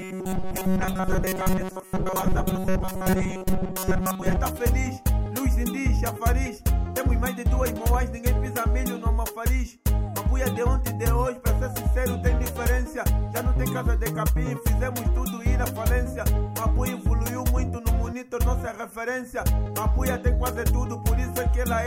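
From the start to 4.37 s, new audio likely arrived too seldom, so the player kept looping a short fragment, roughly 5 ms, in place of most of the real signal. This robotic sound from repeated short buffers imposes a rigid, metallic 188 Hz buzz.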